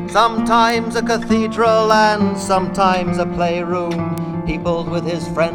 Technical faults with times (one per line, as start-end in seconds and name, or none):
0.70 bit error spike
1.90 bit error spike
4.18 bit error spike